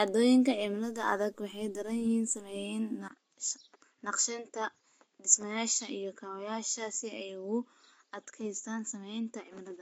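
At about 3.08 s the speech goes dull and a few dB quieter after a 20 ms gap, with nothing above 7.6 kHz and a faint new noise floor. That pattern points to the input likely switching to a poorer device for the rest of the clip.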